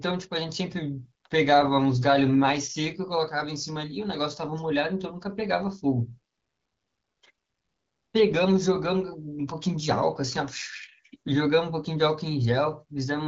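No technical faults can be heard anywhere in this speech clip. It passes through an AMR wideband (HD Voice) codec at a rate that fits 12.65 kbit/s, where the coding leaves only a light trace on the sound.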